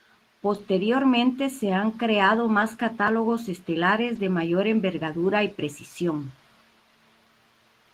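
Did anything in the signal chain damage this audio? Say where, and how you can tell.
Yes. Lost packets rebuilt from error correction, at the network stage, at 0.53 to 0.59 s, 2.61 to 2.63 s right after "se han creado", and 4.15 s just before "de mayor envergadura y". The speech never drops out, but each spot turns briefly rougher and noisier. The decoder filled these holes with the low-bitrate copy carried in the following packet. The 40 ms first patch fits two separate packets, and the 20 ms patches fit single packets.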